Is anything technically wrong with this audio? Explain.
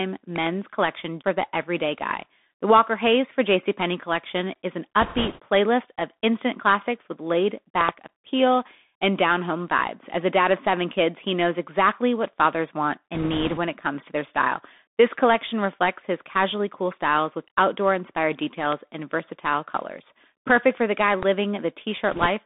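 Yes. The audio has three kinds of fault.

Throughout, the speech passes through a Bluetooth CVSD headset codec. The codec sends one bit per sample at 64 kHz, stepping the waveform up or down with an adaptive step size, and the line is limited to roughly 250 Hz to 3.6 kHz. The result is plainly audible: thin, boxy speech with nothing above about 4 kHz, scratchy s sounds, distortion on loud bright passages where the step cannot keep up, and a granular hiss underneath.

A loud pop, likely a voltage step or pulse from a plug, switch, static discharge or driver glitch, is added on top of the speech four times. A double pop occurs at 0.36 to 0.49 s, just before "collection for the everyday", and another double pop at 7.81 to 7.91 s. Single pops occur at 18.72 to 18.75 s, between "styles with outdoor inspired" and "and versatile colors", and at 21.23 to 21.25 s. Each peaks about 15 to 20 dB above the speech, as a sharp crack while the speech continues beneath it.

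Bit errors on a Bluetooth voice link hit the audio at 5.01 to 5.40 s, at 13.14 to 13.59 s just before "it comes to their", and at 22.12 to 22.26 s. A few percent of the CVSD bits were flipped. Each bit carries only a small step and the errors fade out quickly, so there are no hard clicks. Instead, each stretch gets a rushing, crackly noise laid over the speech.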